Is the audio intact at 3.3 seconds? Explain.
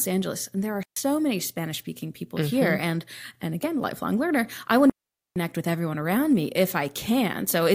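Yes, at 3.3 seconds the speech plays through intact, with no dropout, click, distortion or other fault at that moment.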